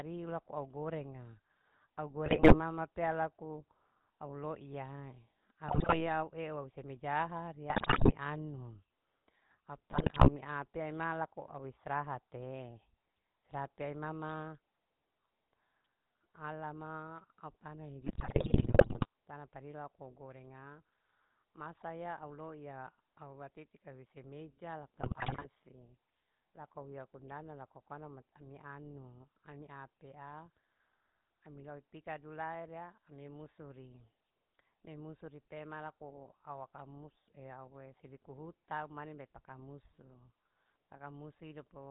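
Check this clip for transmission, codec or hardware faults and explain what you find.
Two faults are present: a GSM full-rate codec colouring the whole recording, and six short bursts of GSM bit errors.

Throughout, the speech sounds buzzy and gravelly, with nothing above 4 kHz. This is the GSM full-rate codec, which fits a 13 kbps stream. It rebuilds the voice from a vocal-tract model driven by a sparse pulse excitation.

From 2.26 to 2.61 s, just before "pea laku au", the speech breaks into squawks, pops and gargling. The same happens at 5.68 to 6.09 s, at 7.70 to 8.15 s just after "eu semejaha ari", and at 9.90 to 10.30 s. The longest burst runs from 18.04 to 19.06 s, just after "alama au tana", and the last from 25.00 to 25.46 s. These are GSM bit errors. Corrupted filter, pitch and gain values reach the decoder, warping the spectrum or spiking the level frame by frame.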